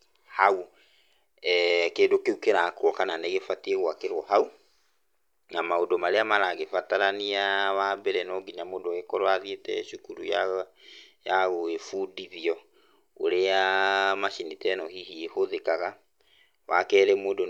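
Speech recording with no technical faults audible anywhere in the clip.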